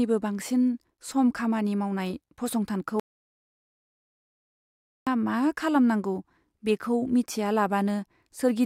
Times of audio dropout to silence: 3.00-5.07

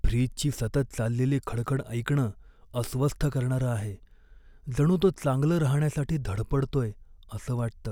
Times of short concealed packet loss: none

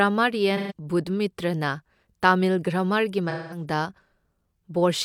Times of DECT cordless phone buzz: none

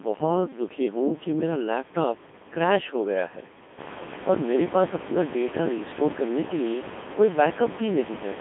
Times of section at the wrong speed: none

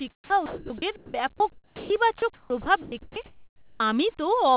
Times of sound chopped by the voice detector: 0.10-1.90, 2.18-3.80

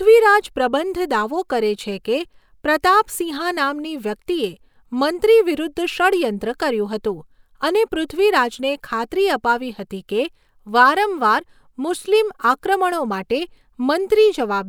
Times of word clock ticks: none

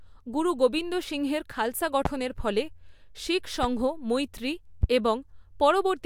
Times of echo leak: none

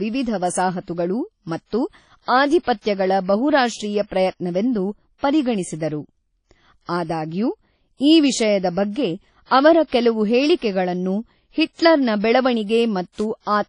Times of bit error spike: 2.72, 8.03, 13.20

